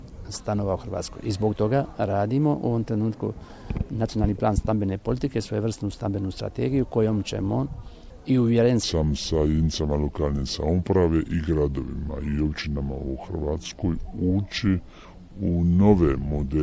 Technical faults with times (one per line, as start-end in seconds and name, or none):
8.83-16.63 wrong sample rate